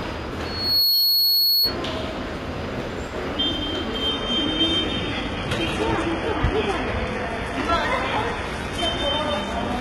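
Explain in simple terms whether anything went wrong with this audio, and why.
Two things went wrong. From 0.45 to 1.77 s there is loudspeaker feedback squeal. A microphone picked up its own speaker, so a 4.4 kHz tone swelled up within about 0.4 seconds.

From 4.09 s to the end, the adaptive stream switches to a lower bitrate. The connection slowed, so the sound turns duller, with more codec artefacts and nothing above 11.7 kHz.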